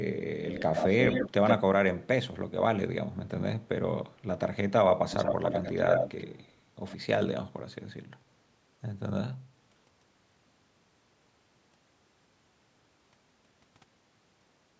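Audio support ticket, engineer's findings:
Delayed second copy of the speech, only a little quieter than the original, at 0.45–1.56 s (about 122 ms behind) and 5.1–6.53 s (about 90 ms behind). Likely echo leak: far-end canceller passing loudspeaker pickup back.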